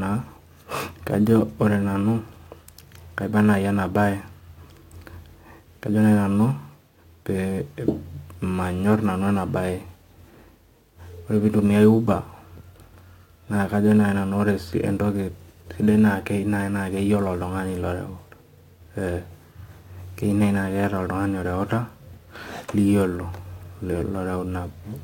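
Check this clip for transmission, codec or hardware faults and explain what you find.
One fault runs through the whole speech clip: crude rate conversion. The sample rate was changed by picking the nearest sample, with no filtering. The ratio fits a 48 kHz to 44.1 kHz conversion. Samples are dropped in a repeating pattern. That creates inharmonic tones, roughly 35 dB below the speech. They sound like a gritty fizz riding on loud and bright sounds.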